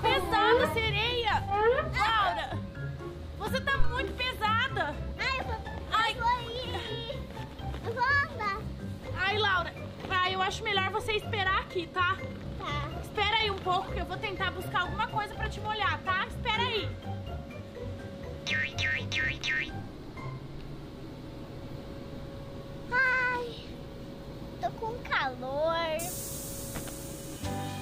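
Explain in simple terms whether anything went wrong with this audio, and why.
At 3.80 s a deep thump, dying away within about 24 ms, is a phantom power thump: the microphone's power was switched, not something bumping the microphone.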